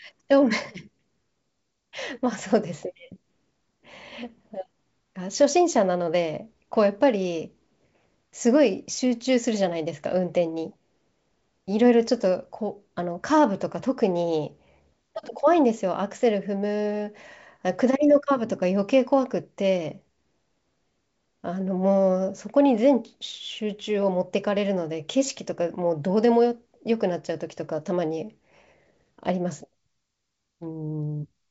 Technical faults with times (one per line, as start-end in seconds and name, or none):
none